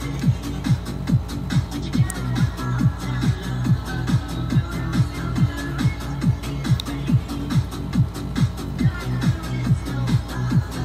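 A nearby switch, motor or static discharge likely arced, and the audio line picked up the burst as an electrical switching spike. It happens twice, at 2.10 s and again at 6.80 s. Each time a sharp snap lands on top of the sound and is gone within a couple of milliseconds. Both snaps peak somewhere around -10 dBFS and are heard as abrupt, dry clicks.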